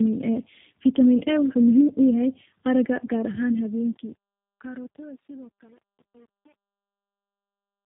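Tandem speech coding runs through the whole clip. The speech was coded twice by low-rate speech codecs, which fits an AMR-NB link followed by G.729A. The second coder reworked already damaged audio. It sounds rough, muffled and warbly, with nothing above 3.8 kHz.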